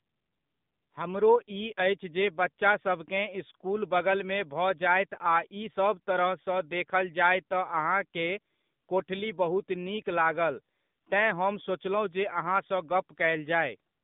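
Across the whole speech clip the sound is thin, boxy and noticeably buzzy and synthetic, with nothing above about 3.8 kHz and the lows rolled off below roughly 150 Hz. This is AMR narrowband mobile codec damage. The voice is rebuilt at 8 kHz sampling from a vocal-tract model fed with only a few pulses per short subframe. The plainly audible coarseness fits a low AMR-NB mode around 7.4 kbps.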